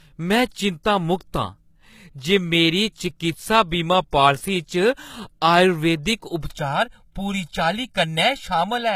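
Low-bitrate audio saved at a high bitrate affects this entire speech recording: nothing exists above 14.9 kHz, and the artefacts of a heavily squeezed earlier encoding persist inside a roomy MP3, likely a roughly 20 kbit/s HE-AAC original re-saved at 192 kbit/s. Channel delay (comb filtering) begins at 6.51 s, just after "च आयुर्वेदिक", and lasts to the end: one channel trails the other by around 1.5 ms, so the mono sum cancels at evenly spaced frequencies starting near 400 Hz, leaving the sound hollow and phasey.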